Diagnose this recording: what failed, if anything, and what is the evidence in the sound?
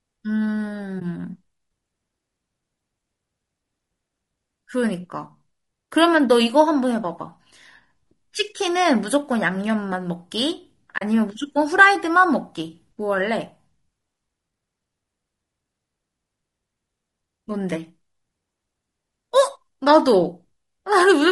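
The codec stage failed throughout. The speech has a plainly audible rough, grainy texture, with noise filling the gaps between harmonics, and the top band sounds lowered or synthetic. This is likely low-delay AAC compression, the AAC-ELD kind used in video calls. Its low-delay window codes a few hundred frequency lines per frame. The sound points to a low bitrate, around 32 kbps, too few bits to code those lines cleanly.

The network or transport stage dropped audio twice, showing AAC frame loss with muting. A brief dip sits at 0.99 to 1.02 s, which fits one lost frame of 20 ms. A longer soft-edged hole runs from 10.97 to 11.02 s, which fits two frames, 40 ms in all. The decoder zeroed the missing spectrum. Its overlapping windows then faded the sound out and back in.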